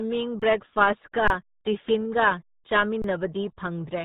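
From the first moment, the speech carries the sound of the RealAudio 14.4 codec. This heavily compressed 8 kbit/s format strips everything above 3.8 kHz and rebuilds the voice from a coarse model, so it comes across muffled and gargly. On a spectrogram the energy ends at a hard ceiling near 3.8 kHz with empty space above it, and the harmonics look smeared and blotchy instead of forming clean horizontal lines.

Three underruns with held sample interrupt the speech, from 0.40 to 0.42 s, from 1.28 to 1.30 s, and from 3.02 to 3.04 s. Each time the output buffer ran dry for about 23 ms, which fits a 1024-sample buffer, and the converter held its last value. On the waveform each gap is a flat line sitting off zero. The voice stops abruptly, and roughly 20 ms of sound went missing before it resumes.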